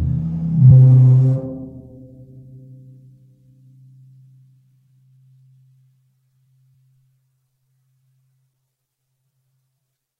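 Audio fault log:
0.70 s compressed frames skipped: the music jumps ahead about half a second, as roughly twenty 23.2 ms frames went undecoded.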